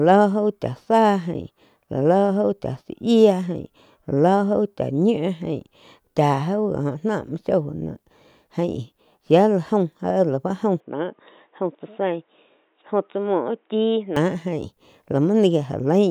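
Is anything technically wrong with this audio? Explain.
Yes. From 10.80 to 14.17 s the sound of the speech changes abruptly, most likely because the input switched to a poorer device. The replacement path passes nothing above 3.8 kHz, so the speech turns dull and boxy. It also arrives about 5 dB quieter and carries its own faint background noise, well below the speech. There is no gap at either switch. The tone simply flips, then clears again at 14.17 s.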